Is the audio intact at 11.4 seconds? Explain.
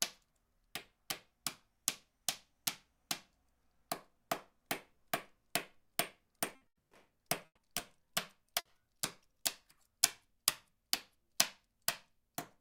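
Yes, the audio at 11.4 seconds is intact, with no dropout, click, distortion or other fault in the sound at that point.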